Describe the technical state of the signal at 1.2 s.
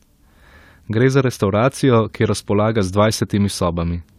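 At 1.2 s the speech signal is intact, with no audible dropout, distortion, or other technical fault.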